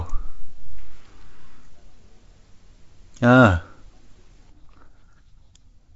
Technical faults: bit errors on an ADPCM link

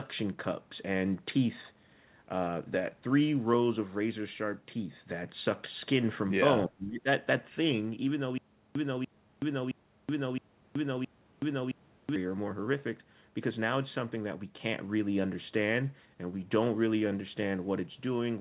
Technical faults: speech suppressed in double talk; echo leak; stutter with silent gaps

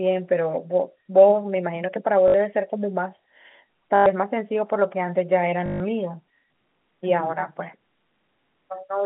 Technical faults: packet loss with last packet repeated

